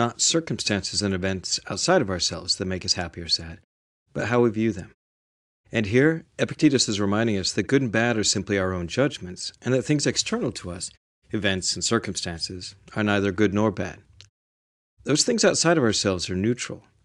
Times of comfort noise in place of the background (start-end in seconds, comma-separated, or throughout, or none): none